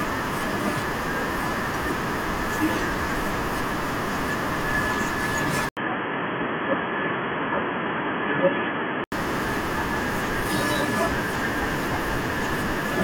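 From 5.69 s to 9.12 s the speech turns dull and boxy, with nothing above 3.3 kHz, a faint new background noise well below the speech, and a brief 80 ms gap at the switch. The input was likely switched to a poorer device.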